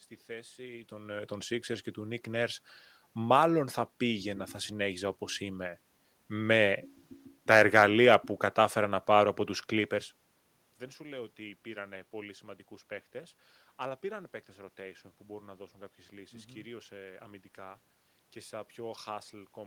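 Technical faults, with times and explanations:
No technical faults turn up here: the room's own background noise sits under the speech all along, and the level shifts near the start and again around 9.5 s are just the talker moving relative to the microphone.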